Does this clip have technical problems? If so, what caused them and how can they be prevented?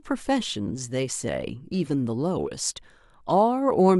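No, there are no technical faults to hear in this clip. Since nothing went wrong, no cause needs tracing and nothing needs preventing.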